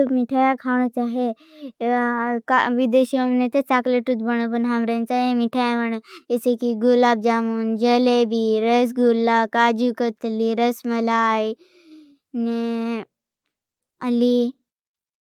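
Nothing stood out on listening to this speech recording.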